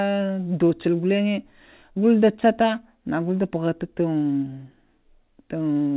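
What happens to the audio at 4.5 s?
At 4.5 s the speech carries straight through without a break, dropout or distortion, keeping the narrow, telephone-band character of G.711 coding that runs through the whole clip.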